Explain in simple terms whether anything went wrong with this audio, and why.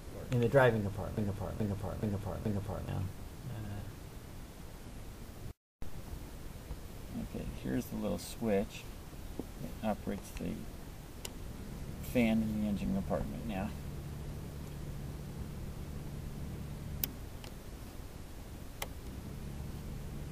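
From 1.17 to 2.88 s, one short scrap of sound, 0.43 s long, plays four times in a row, like a scratched record. This broken-record loop likely came from a stalled player or stream repeating its last piece, so the audio meant for that stretch is lost.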